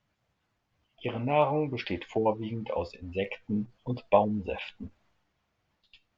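A speech clip with clock slip clicks from 0.20 s to 6.17 s. Faint ticks repeat about ten times a second, around fifty in all. Each is one sample dropped or repeated. The likely cause is two unsynchronised clocks, differing by roughly 200 ppm.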